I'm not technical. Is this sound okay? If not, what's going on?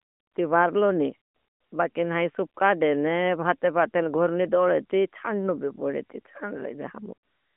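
Yes, nothing has gone wrong here. It has the narrow, slightly boxy sound of an ordinary mobile phone call carried by the AMR narrowband mobile codec, which keeps nothing above about 3.5 kHz.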